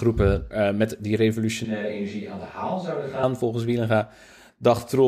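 Right after "met die", at 1.65 s, the sound abruptly turns roomy and hollow, loses bass, drops roughly 5 dB, and a room noise floor about 35 dB below the speech becomes audible. At 3.23 s it snaps back just as suddenly. This is likely a switch to a distant microphone. A simple gain dip would not add room tone or hollowness, and added reverb would not also thin the bass or raise the noise floor.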